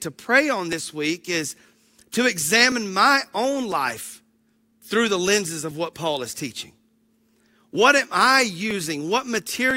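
From 0.73 s, just after "to pray on", to 9.71 s, periodic USB or driver dropouts recur every 1.00 s. Something blocks the audio path at that interval, a millisecond or so of speech is skipped each time, and a regular tick results while speech is present.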